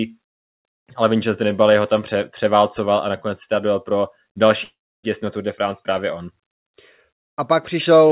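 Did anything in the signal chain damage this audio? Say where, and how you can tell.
Yes, a likely long network dropout at 4.64–5.05 s, after "si dojel pro další": a fading buzz, then silence, and speech resumes with content skipped rather than delayed.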